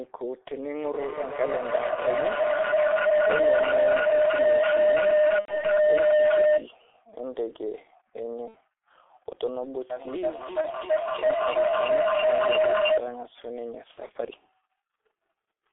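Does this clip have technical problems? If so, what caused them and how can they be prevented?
Yes. The whole clip passes through the G.723.1 codec. Everything sits between 300 Hz and 3.5 kHz, so the speech is muffled and hoarse, with smeared consonants. The heavy damage fits a rate near 6.3 kbit/s. To prevent it, use a wideband codec such as Opus.

From 0.83 to 6.73 s there is a feedback howl. A second device on the same call loops sound back, and each trip gains level. It settles near 700 Hz, pulses about every third of a second, and peaks about 8 dB above the speech. To prevent it, mute or remove the extra device in the room.

There is VoIP packet loss concealed by the speech codec at 5.39 to 5.59 s, 8.48 to 8.57 s, 10.61 to 10.71 s, and 13.91 to 14.17 s. In each gap the decoder stretches the last sound into a fading buzzy tone or coloured noise, and the speech stays weak afterwards. 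The gaps point to roughly 90, 60, 30 and 120 ms of lost audio. The last loss is scattered across about 240 ms. To prevent it, use a steadier connection or forward error correction.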